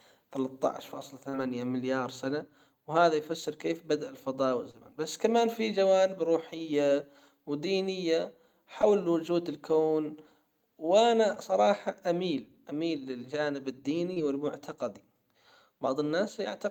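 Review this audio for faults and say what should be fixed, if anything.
Brief smears and wobbles at 1.29–1.35, 4.71–4.75, 8.81–8.85, 11.35–11.38 and 14.14–14.18 s are short concealed packet loss. The decoder lost 20 to 40 ms of audio each time, bridged it by extending the preceding sound, then crossfaded back. Prevent this with a larger jitter buffer or forward error correction on the network path.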